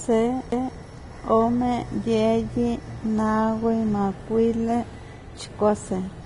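Throughout, the speech is hissy and grainy with smeared consonants, likely from heavy Vorbis compression at a low bitrate, around 29 kbps. A spectrogram shows nothing above 10.6 kHz.

At 0.51 s, a CD skip briefly mutes the audio, then resumes elsewhere on the disc. This appears as a short waveform gap and discontinuity.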